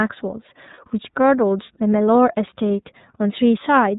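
From the start, the speech passes through the iLBC codec, and the damage is plainly audible. Everything above 4 kHz is gone, so on a spectrogram the energy stops at a flat ceiling with empty space above it. Each short block of excitation is coded on its own, which leaves the speech clear but slightly rough and synthetic. The codec runs with 30 ms frames in the 13.33 kbps mode.

At 0.74 to 0.79 s, lost iLBC frames break in. The gap of about 30 ms fits a single dropped frame. The decoder fills it by repeating the last pitch cycle blended with noise, so the sound becomes a short, held, slightly buzzy vowel. On a waveform this appears as a stretch of near-identical repeating periods. A spectrogram shows steady, smeared harmonics there. Because each frame is independent, normal speech returns immediately afterwards.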